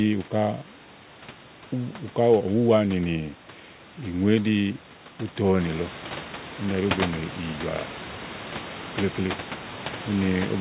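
No technical faults are audible.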